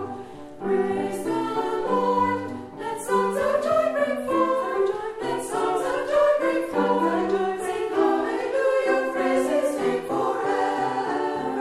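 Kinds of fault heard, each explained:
No technical fault can be heard anywhere in the clip. Nothing in it calls for a fault description.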